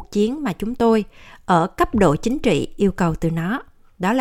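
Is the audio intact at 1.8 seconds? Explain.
Yes, the speech at 1.8 seconds is intact, with no fault at that moment.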